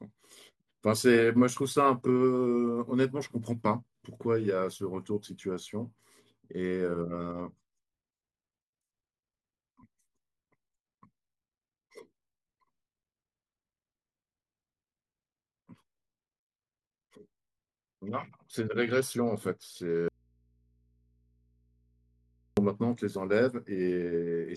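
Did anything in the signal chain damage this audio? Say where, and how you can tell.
Yes. From 20.08 to 22.57 s the speech cuts out abruptly for about 2.5 s, an audio dropout to a faint residue. The gap holds only a low mains hum, roughly 40 dB below the normal level, and the speech returns just as suddenly, with no fade either way. The hum means the path after the break stayed live while the source was gone, which points to the analogue wiring, likely an intermittent connector or cable leaving the input open.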